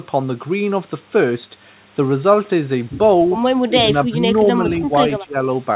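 From 3.67 to 3.88 s, 4.08 to 4.22 s, 4.79 to 4.94 s and 5.19 to 5.38 s, the speech dips sharply, by about 15 dB, and by about 10 dB in the third dip. This is likely speech suppressed in double talk. The echo canceller mistook the talker for returning loudspeaker echo and turned the speech down. Throughout, the band stops at 4 kHz, which fits a 64 kbps G.711 A-law call path.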